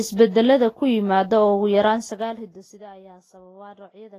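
Throughout the speech the sound is hissy and grainy, with roughened tones, smeared consonant attacks and nothing above 14.2 kHz. That plainly audible damage is likely Vorbis compression at a low bitrate near 28 kbps, which turns fine treble detail into noise.

From 1.79 to 2.90 s a ticking zipper noise rides on the speech as the level drops by about 25 dB. The level moves in unsmoothed steps of about 2 dB, around ten each second, and each step adds a small click.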